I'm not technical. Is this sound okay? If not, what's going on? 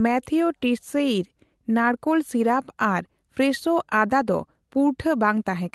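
Yes, this sound is okay, with nothing going wrong in the speech.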